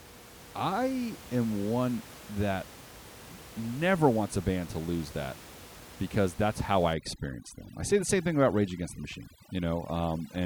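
From 6.94 s to the end, overdone noise removal sets in: a reducer pushed too hard cuts any frequency band near its noise estimate. The room noise, about 19 dB below the speech, drops and breaks up into twinkling specks.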